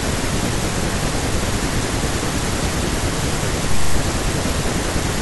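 No audible technical faults.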